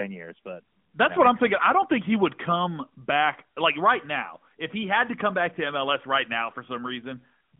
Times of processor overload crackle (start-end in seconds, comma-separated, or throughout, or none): none